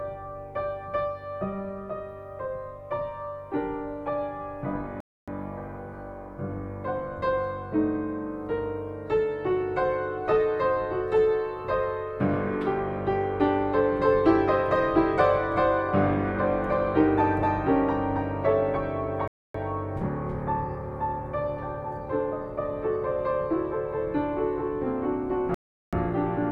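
At 5.00 s the sound cuts to silence for about 0.27 s, then resumes exactly where it stopped. This is a rebuffering stall. The player ran dry of downloaded audio and waited. The same happens at 19.28 s, about 0.27 s, and at 25.54 s, about 0.38 s. Nothing is skipped. Each gap only adds time.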